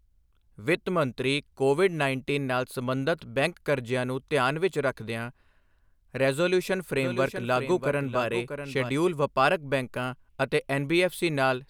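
Speech carries a doubled audio track from 6.97 s to 8.89 s, just before "ਵਪਾਰਕ ਬੈਂਕਾਂ ਅਤੇ": a dry, full-band copy trails roughly 0.7 s behind, about 10 dB quieter. It was likely captured a second time by a slower path. On a spectrogram, faint duplicate patterns repeat at that offset. The waveform shows the copy appearing and vanishing abruptly.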